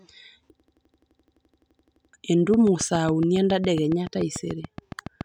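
From 0.60 to 2.13 s there's a system hang loop: the driver stalled while the hardware kept replaying one 85 ms chunk, 18 times at about 11.7 Hz, which fits a 4096-sample buffer. It's a machine-gun stutter, and roughly a second and a half of speech is lost.

Then from 2.54 to 5.22 s comes a train of clicks: around twenty evenly spaced pops at about 7.1 per second, peaking about 5 dB above the speech, so they tick over it. The likely culprit is interference from nearby gear or a faulty connection or power supply.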